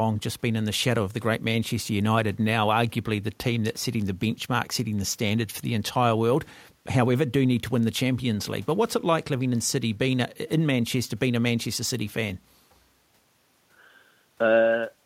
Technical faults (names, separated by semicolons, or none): none